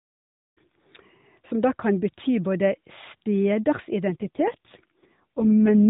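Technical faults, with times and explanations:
4.10–5.87 s, AMR rate drop: the speech turns buzzier and more synthetic, with no gap and no loss of band, which points to the mobile codec stepping down from around 12.2 kbps to its 4.75 kbps mode, leaving too few bits to model the voice finely.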